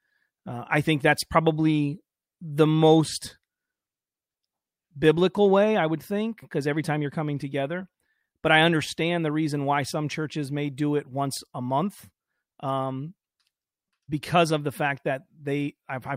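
From 9.13 to 11.51 s, sample clock jitter adds a faint hiss that rises with loud, bright sounds: timing error of about a microsecond leaves noise roughly 45 dB down.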